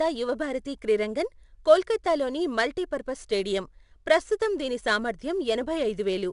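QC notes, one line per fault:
Throughout: 4-bit ADPCM compression. Gritty hiss rides on louder speech, attacks roughen as step size lags, nothing above 10.6 kHz, which fits an 89 kbps stream.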